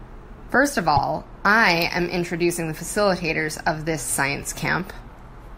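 At 0.96 s, lasting 32 ms, the speech jumps ahead with a brief glitch, likely a broken MP3 bit reservoir. It shows as a brief break in the pattern on a spectrogram.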